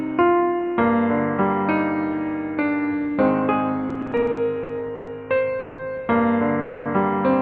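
From 3.89 to 5.09 s the sound drags and hiccups through a run of brief holds, the longest about 120 ms: repeated stalls (stutter), as late packets kept draining the jitter buffer. At 5.59 to 5.80 s and 6.60 to 6.87 s the sound hangs as a fading buzz for 190 ms and 250 ms, then resumes where it stopped: a call audio freeze, likely from packets held up in transit.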